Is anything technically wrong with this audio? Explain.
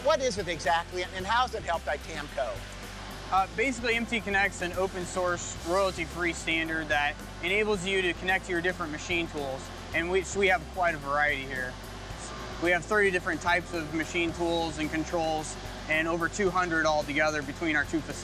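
No, nothing is technically wrong with this audio.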